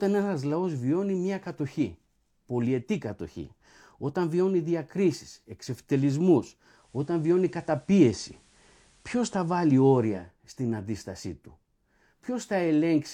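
From 6.67 to 10.32 s, after "όταν βιώνει διακρίσεις εξευτελισμούς", digital radio blending to analogue FM adds faint hiss and shifts the level by about 3 dB. Unlike a dropout, the speech never stops.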